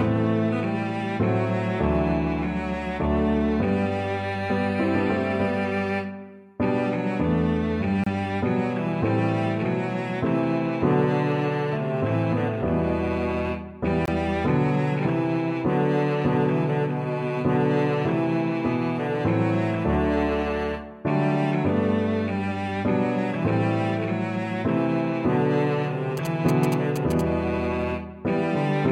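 At 8.04 to 8.07 s and again at 14.06 to 14.08 s, mismatched timestamps leave a gap between stream segments, spacing that fits 6-second segments, and the player fills each with silence, heard as hard-edged dropouts of 27 and 24 ms. From 26.17 to 27.21 s, a nearby 2G phone's GSM signalling bursts are rectified by the audio circuit, producing a galloping dit-dit-dit of short 217 Hz buzzes roughly 10 dB below the sound.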